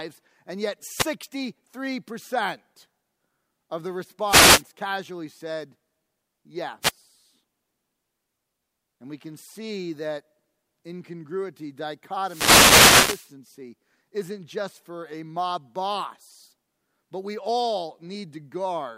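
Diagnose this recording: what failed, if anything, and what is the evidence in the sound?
What failed is the radio link on a wireless microphone, upstream of the analogue input, and we get four wireless microphone noise hits. There's a quick swish of static from 0.97 to 1.07 s right after "and yet", a longer burst from 4.27 to 4.63 s between "of the" and "casually said", another short one at 6.82 to 6.92 s, and a long hit from 12.22 to 13.32 s. The FM signal is dropping into reflection nulls, so receiver noise swells up over the audio.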